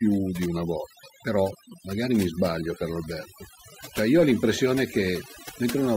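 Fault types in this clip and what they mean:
overdone noise removal: Throughout the speech the background drops to an unnatural near-silence scattered with small twinkling, chirpy specks, and the voice itself has its softer edges eaten away. This is a noise reduction stage pushed far too hard: any frequency band it judged close to the noise floor was pulled down or shut off entirely. The quieter components of the voice were treated the same as the noise around them.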